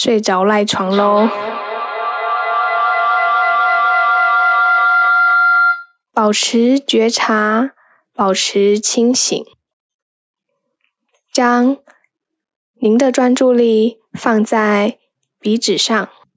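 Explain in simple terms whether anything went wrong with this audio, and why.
Feedback howl, 0.86 to 5.97 s: two devices in one room loop the sound about every 0.2 s, each pass louder, until a tone around 1.5 kHz builds, as loud as the speech.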